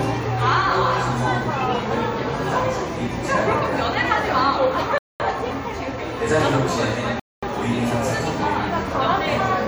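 At 4.98 s and again at 7.20 s, the audio drops into a rebuffering stall: playback ran dry and paused for about 0.22 s, then 0.23 s, before resuming exactly where it stopped. Both gaps appear as flat, empty stretches in the waveform and blank columns across the spectrogram.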